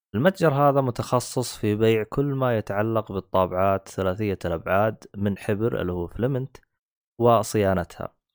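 A gritty, inharmonic fizz runs under the speech for the whole clip, sitting roughly 25 dB below it and rising with louder and brighter sounds. This is crude rate conversion: samples were simply repeated without filtering, which fits a 32 kHz to 48 kHz change.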